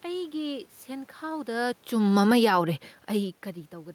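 From 1.94 to 3.39 s, automatic gain falling pulls the level down by about 4 dB. Room noise sinks along with the speech, unlike a talker leaning back.

From 2.5 s to the end, automatic gain rising answers an input drop of about 24 dB. Speech and background swell together gradually, rather than only the speech changing.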